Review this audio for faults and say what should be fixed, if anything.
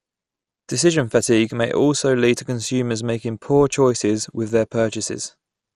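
The whole clip carries MP2 compression damage: the speech sounds dull and gurgly, with grainy distortion and nothing above 13.6 kHz. That's likely Layer II running short of bits, fitting roughly 64 kbps, so upper sub-bands drop out and the rest get coarsely quantised. To prevent it, encode at a higher bitrate or keep an uncompressed master.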